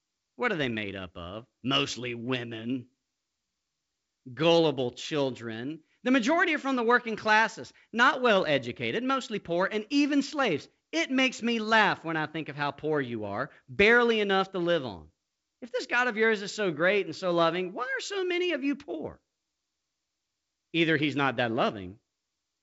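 No technical faults can be heard anywhere in this recording.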